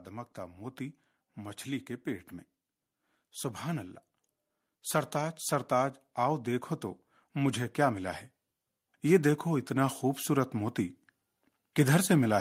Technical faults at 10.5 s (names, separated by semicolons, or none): automatic gain rising